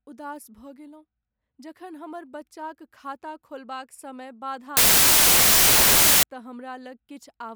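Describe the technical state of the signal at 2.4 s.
At 2.4 s the speech signal is intact, with no audible fault at that moment.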